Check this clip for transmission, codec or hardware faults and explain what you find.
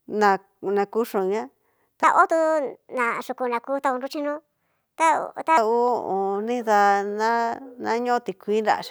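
One fault stands out: a section at the wrong speed from 2.04 to 5.58 s. The speech runs 1.36 times faster, pitch rising about five semitones, most likely from playback on the wrong clock. Unlike a pure pitch shift, timing hurries too, with abrupt switches at both boundaries.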